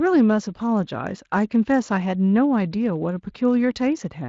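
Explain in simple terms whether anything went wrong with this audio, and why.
Nothing stood out as wrong when listening to this speech recording.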